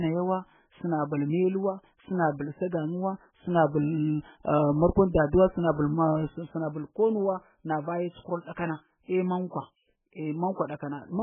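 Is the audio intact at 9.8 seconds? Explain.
No. At 9.8 seconds, as across the whole speech clip, the sound is heavily damaged, most likely by MP3 compression at a very starved bitrate, something on the order of 8 kbps. The encoder has cut everything above 3.5 kHz and dropped weak frequency lines that flicker in and out between frames, so the speech sounds watery and swirling, with smeared onsets. A plain low-pass filter would only dull the sound, without that warbling.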